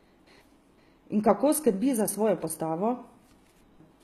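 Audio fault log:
throughout: HE-AAC compression, plainly audible across the speech. Treble reaches about 14.9 kHz yet sounds synthetic, with gritty, metallic s sounds, likely from upper bands copied up from lower ones, fitting roughly 20 kbps. Unlike plain low-pass filtering, the top stays bright, not dull.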